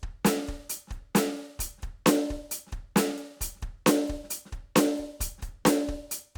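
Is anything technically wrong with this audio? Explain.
No, nothing in this music recording points to a technical problem, and the signal holds steady throughout.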